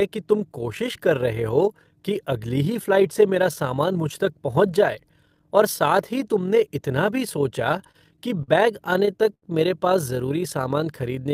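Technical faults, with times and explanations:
Throughout: overlap-add ripple. The speech was split into windowed frames and rebuilt with an overlap that does not sum to constant gain, so the level swings by about 6 dB at each frame boundary. This sounds like a rough, robotic flutter at around 40 Hz.
7.71–8.50 s and 8.94–9.44 s: repeated stalls (stutter). Packets arrived late, and the jitter buffer kept running dry. In the first stretch, right after "ही तुमने इतना भी", there are five short holds with the longest at 43 ms. In the second, ending before "मेरे पास ज़रूरी", there are four holds with the longest at 82 ms. Each hold stretches the last sound, so the speech drags and stutters without losing content.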